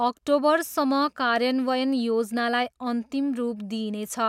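No technical faults can be heard in the speech.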